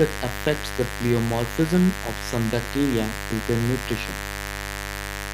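A raspy mains buzz runs under the whole of this speech clip, at roughly 10 dB below the voice, built on 50 Hz harmonics reaching several kilohertz; a spectrogram shows evenly spaced horizontal lines throughout.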